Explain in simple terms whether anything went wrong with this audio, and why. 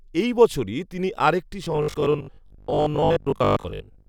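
From 1.64 s to the end, the speech turns into a flat, metallic 50 Hz buzz: robotic sound from repeated short buffers, likely roughly half the audio being 20 ms repeats.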